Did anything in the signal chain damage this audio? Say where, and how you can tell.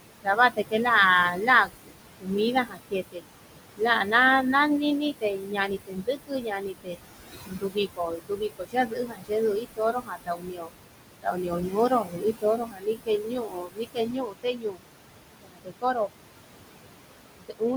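Yes, call processing. Noise suppressor artifacts run throughout: background noise is pulled down about 21 dB between phrases and swells back under speech. That pumping, unlike the steady room noise about 10 dB below the speech, marks a frame-by-frame gain.

Speech cut by the noise suppressor occurs at 0.23–0.73, 1.32–3.23, 3.77–4.13, 5.21–14.82, 15.42–16.13 and 17.38–17.63 s, with soft sounds dipping about 17 to 22 dB. They fade rather than vanish, so this is misjudged suppression, not packet dropout.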